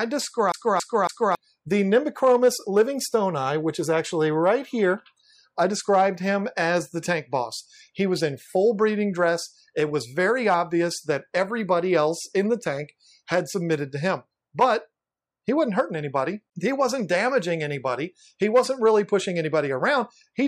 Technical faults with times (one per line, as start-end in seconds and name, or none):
0.52-1.35 CD stuck on one turn